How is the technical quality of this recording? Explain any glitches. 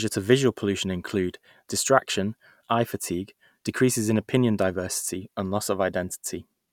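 No glitches can be heard anywhere in the recording; the signal stays continuous and steady throughout.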